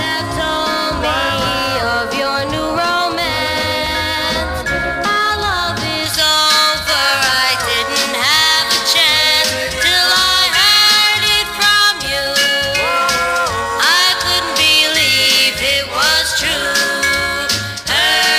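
From 6.06 s to the end, the audio has pre-emphasis left on: the treble boost applied for recording or transmission was never undone by the matching de-emphasis stage. The tilt matches a J.17 curve, leaving 10 kHz about 11 dB louder relative to 1 kHz than it should be. From that point the sound turns thin and glassy, with the low and middle ranges losing weight and the top end hissing and sibilant.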